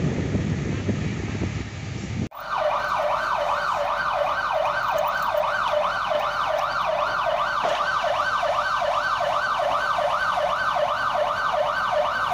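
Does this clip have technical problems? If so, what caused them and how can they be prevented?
Yes. A doubled audio track runs from the start to 1.62 s, likely because a second, slower capture path fed the same audio into the mix. An undecayed full-band copy trails about half a second behind at roughly equal level, then stops abruptly. Prevent it by routing each source through only one capture path.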